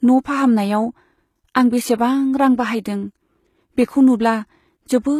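A speech recording has likely been passed through HE-AAC compression at a very low bitrate, which fits something around 20 kbps. The encoder keeps only the lower spectrum and synthesises the treble by copying lower bands upward under a coarse envelope, so throughout the clip the top end sounds bright but false. The codec damage is plainly audible: sibilants turn gritty and metallic, and nothing is present above about 14.9 kHz.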